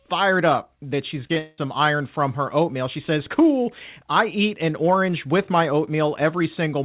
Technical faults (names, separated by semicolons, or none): short concealed packet loss; long network dropout